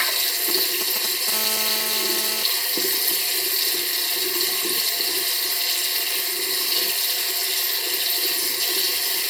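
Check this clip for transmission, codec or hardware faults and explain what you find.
Two faults appear, both from a nearby 2G handset.

From 0.49 to 1.30 s there are GSM signalling bursts: a galloping dit-dit-dit of brief raspy buzzes, only slightly quieter than the sound itself. A phone handling signalling sends short clusters of radio bursts, and the audio circuitry rectifies each cluster into snatches of 217 Hz buzz.

From 1.32 to 2.43 s this becomes a continuous GSM phone buzz: a hard, harmonic-rich rasp at 217 Hz, about 7 dB below the sound and unrelated to it. With a call underway, the phone transmits steadily at 217 bursts per second, and the audio path rectifies that pulse train into a constant buzz.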